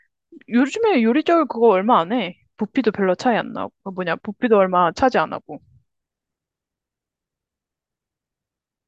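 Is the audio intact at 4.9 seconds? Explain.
Yes, at 4.9 seconds the speech plays through intact, with no dropout, glitch or other audible fault at that moment.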